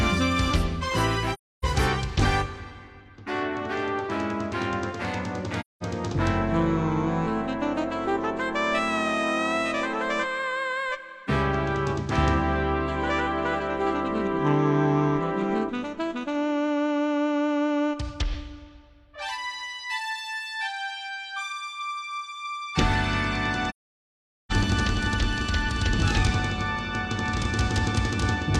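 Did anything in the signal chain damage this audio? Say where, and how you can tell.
Yes, there's AAC frame loss with muting, down at the codec stage. The sound drops into soft-edged silent holes at 1.33–1.65 s, 5.60–5.83 s and 23.69–24.52 s, roughly 0.3, 0.2 and 0.8 s long. That fits runs of several lost frames, around 19 in the long one. The decoder zeroed the spectrum for the missing frames, so the overlapping windows fade the audio out and back in rather than cutting it hard.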